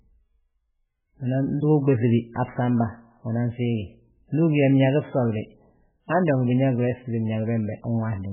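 The speech is carried throughout by a thin, band-limited sound with nothing above 3.4 kHz, so s sounds and breath noise lose their edge. The damage is heavy. Quiet detail flickers in and out, giving a watery, swirling texture. Consonant attacks smear. This is likely MP3 compression at a very low bitrate, around 8 kbps. At that rate the encoder cuts the treble and drops weak frequency lines from frame to frame.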